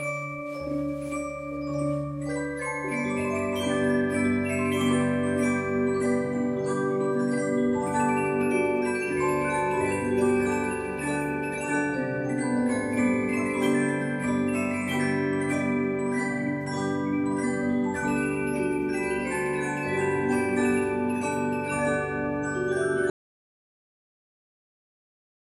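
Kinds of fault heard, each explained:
Audio dropout to silence: at 23.1 s the sound stops abruptly mid-flow and the last 2.5 seconds to the end are silent, with no room tone or noise floor at all. That points to the input likely being lost while recording carried on, and whatever occurred during that stretch is gone. A fade-out would taper gradually and a noise gate would leave low-level residue or breathing, whereas this is a hard cut to silence.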